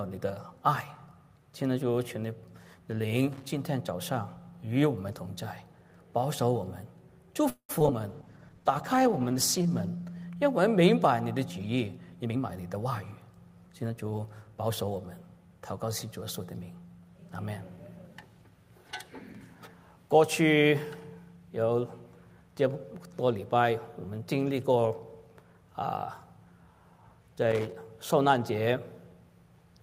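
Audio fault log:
3.33–3.50 s and 27.51–27.77 s, loose connector crackle: a worn contact makes and breaks as it shifts, chopping the signal and adding pops. Each burst is an irregular scratchy crackle; the waveform shows jagged spikes and dropouts, and the spectrogram shows scattered broadband vertical streaks.
7.49–7.93 s, repeated packet loss (robotic sound): audio went missing again and again, with the longest hole near 196 ms. Each hole was patched by stretching the last sound, so about half of this span is concealment. It sounds choppy. The spectrogram shows smeared, repeated frames with hard edges.
8.09–9.96 s, call bitrate drop: the encoder was forced to spend far fewer bits, which fits a fall from about 32 to 13 kbps, held at its lowest for about 1.74 s. The sound turns rough, watery and muffled. On the spectrogram the upper band thins and is cut off.
8.60–9.71 s, jitter buffer slow-down: to rebuild its reserve the receiver repeated single pitch periods, adding 75 ms. 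The audio plays at 94% speed with unchanged pitch, drawn out. On the waveform, repeated near-identical cycles stretch this stretch.
12.26–12.85 s and 13.67–14.70 s, jitter buffer speed-up: the receiver trimmed pitch-period slices to cut excess delay, removing roughly 150 ms and then roughly 100 ms. Playback runs at 120% and then 108% speed at the same pitch and sounds hurried. The spectrogram shows compressed events with small seams.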